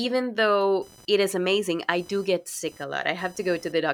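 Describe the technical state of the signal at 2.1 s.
At 2.1 s the computer's changing processor, graphics or mouse load is shifting the shared ground of the audio circuit, producing computer activity noise from 0.82 to 3.72 s: a buzzing, chirping texture pulsing at around 1 kHz, roughly 30 dB beneath the speech.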